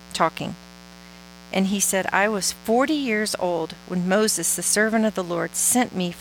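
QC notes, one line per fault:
Throughout: mains buzz, a steady raspy 60 Hz buzz roughly 25 dB below the speech, with switching-spike harmonics reaching up into the kHz range.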